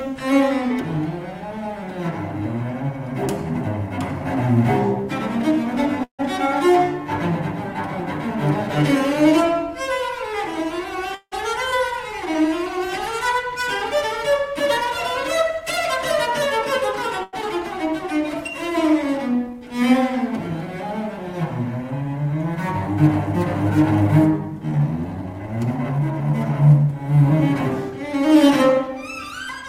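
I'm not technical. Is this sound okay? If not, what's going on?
No. There are three kinds of fault.

Call audio freeze, at 6.03 to 6.21 s and 11.15 to 11.34 s: the sound's data was likely held up in transit, so the receiver ran out of audio to play. It stretched the last sound into a fading buzz, went briefly silent, then picked up where it left off. Each pause adds under a fifth of a second.

Short stall from a late packet, at 17.23 to 17.35 s: one piece of audio arrived late. The receiver held the last sound for about a tenth of a second until it came, so that moment sounds drawn out, with a slight buzz or dip. Nothing is lost.

Jitter buffer speed-up, from 24.63 to 29.63 s: the receiver had built up extra delay and trimmed it by snipping out many tiny slices of sound. Playback runs about 6% fast at normal pitch, dropping roughly a third of a second and sounding slightly hurried.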